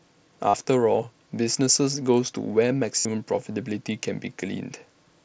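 At 0.48 s and again at 2.99 s, concealed Bluetooth headset packet loss. Lost packets were filled by repeating recent waveform, giving a buzzy held tone for about 52 ms and 60 ms.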